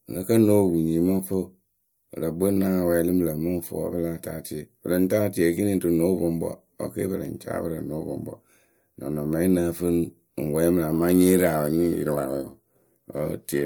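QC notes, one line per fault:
10.93 to 13.65 s, periodic clock jitter: a rough, metallic edge on the speech, from a converter clock wobbling at around 1 kHz and adding sidebands.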